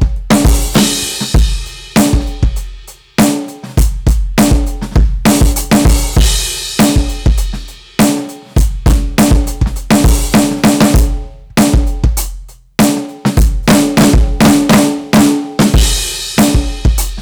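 Hard clipping runs through the whole music clip: the signal is driven about 20 dB past what one stage can pass, so around a tenth of the waveform is sliced flat. Unlike soft saturation's warm rounding, these squared tops spray high harmonics, giving every loud moment a harsh, buzzing fuzz.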